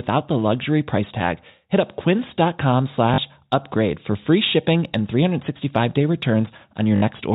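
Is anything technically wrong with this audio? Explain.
Yes. There is packet loss with the last packet repeated, at 3.14 to 3.18 s (40 ms) and 6.96 to 7.02 s (60 ms). The receiver replays the previous packet to fill each gap, giving a brief robotic stutter and a buzz that fits 20 ms packets. Unlike a dropout, the gap is filled rather than silent. The G.711 telephone band limit sits under both.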